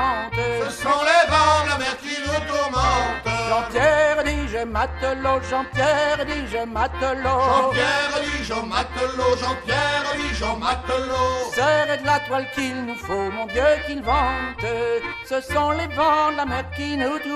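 No technical faults are audible.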